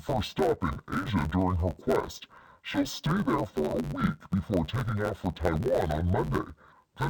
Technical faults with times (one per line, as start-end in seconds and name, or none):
0.00-7.10 interleaved audio read as planar